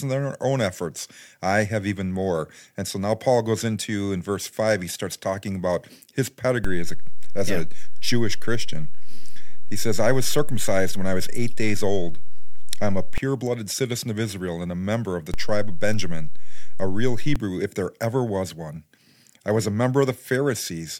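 At 6.64 s, after "starts talking about his", a DC step shifts the waveform's zero line. It thumps in, then thumps out at 13.18 s, before "blooded citizen of". Another runs 15.34 to 17.36 s, between "member of the" and "if there ever was".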